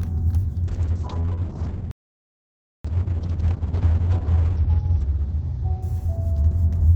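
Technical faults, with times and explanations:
0.69 s to 6.89 s, call bitrate drop: the encoder's rate falls from 48 kbps to 7 kbps, staying at its lowest for 2.7 s, and the audio band shrinks from 20 kHz to 6 kHz. The sound turns muffled and takes on a rough, watery grain as detail is coded coarsely. Unlike a plain low-pass filter, which only dulls the top end, this adds smeared, bubbly texture to everything that remains.
1.91 s to 2.85 s, playback stall: the output goes completely silent for about 932 ms in the middle of the sound, then picks up again. This is likely the player running out of data or its thread being blocked. What sets it apart from network packet loss is the length and cleanness of the gap: a single solid silence close to a second long, with no concealment, and not a string of short glitches.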